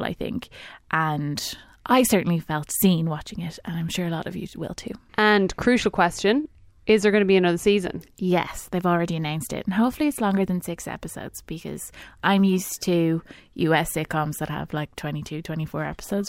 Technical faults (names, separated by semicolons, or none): none